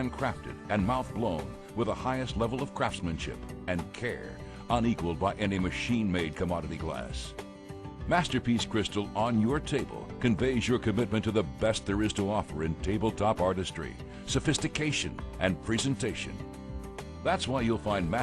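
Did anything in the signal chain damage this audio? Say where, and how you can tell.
No, nothing in the signal chain damaged this audio.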